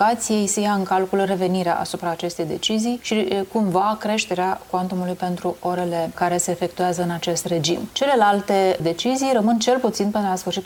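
The audio has compressed frames skipped at 7.43 s: it jumps ahead by about 50 ms, around two of its 23.2 ms frames. Unlike a dropout, nothing goes silent.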